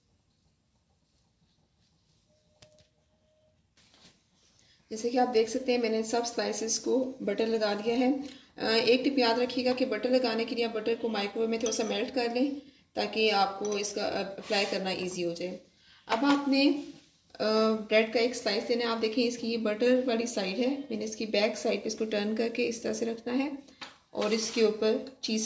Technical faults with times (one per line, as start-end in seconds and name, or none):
none